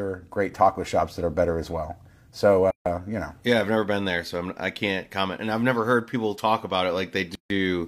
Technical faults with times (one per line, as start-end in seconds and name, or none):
2.70-2.86 gap at a join of encoded pieces
7.35-7.50 gap at a join of encoded pieces